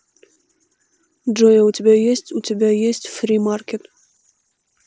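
At 0.33 to 0.36 s, a short run of voice packets between the headset and the phone went missing, and the receiver covered roughly 30 ms of audio with concealed Bluetooth headset packet loss, repeating the closest-matching stretch of the preceding waveform. Because several consecutive packets were lost, the repetition shows as a brief buzzy, steady tone at full level, followed by a slight warble as the real speech picks up again, heard over the light graininess of the mSBC wideband link.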